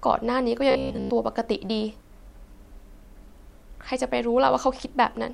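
A speech recording with a stretch of robotic sound from repeated short buffers, from 0.71 to 1.10 s. Here the voice collapses into a rigid, metallic buzz at about 66.7 Hz. The phrasing stays roughly recognisable underneath. The likely cause is audio arriving too seldom, so playback repeats a short chunk to fill the gap. The buzz pitch fits a chunk of about 15 ms. Roughly 70% of that stretch is repetition rather than real sound.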